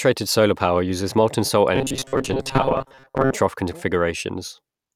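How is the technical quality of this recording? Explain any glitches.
The recording has one clear glitch. From 1.76 to 3.33 s, just after "power uses molten salt", there is robotic sound from repeated short buffers. A rigid metallic buzz near 134 Hz follows the speech only roughly. It likely comes from late audio, with roughly half the signal filled by looping 7.5 ms buffers.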